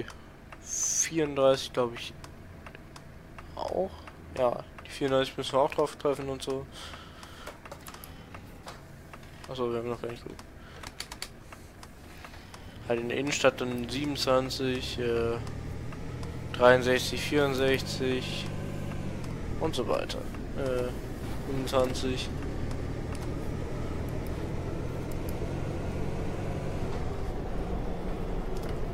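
No technical faults are audible.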